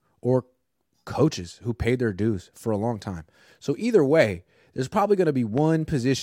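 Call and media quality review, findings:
Loud pop, single sharp click over the speech at 5.58–5.60 s, just after "either way there's probably"; peaks a few dB above speech, which continues beneath. Likely a voltage transient from a plug, switch or static discharge, shaped by downstream circuitry.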